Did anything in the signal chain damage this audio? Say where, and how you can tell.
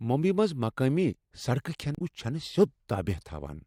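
Yes, at the codec or storage stage: damaged data in the compressed stream. From 1.95 to 2.02 s the speech breaks into a short glitch, about 67 ms long. The decoder hit bad frames there, lost sync and jumped ahead to the next header it could read.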